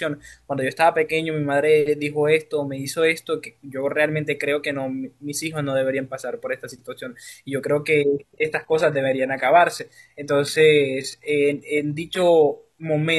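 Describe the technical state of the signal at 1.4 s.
At 1.4 s the signal is intact, with no dropout, clipping, distortion or other technical fault audible at that moment.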